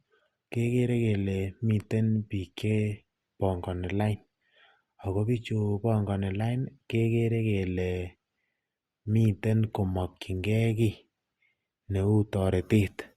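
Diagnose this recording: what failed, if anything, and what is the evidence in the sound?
Nothing in this speech recording stood out on listening that would point to a failure at any stage of the chain.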